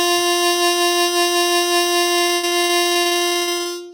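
From 2.15 to 3.67 s, repeated packet loss left gaps up to 80 ms, each patched by extending prior sound, so the music turns choppy and robotic.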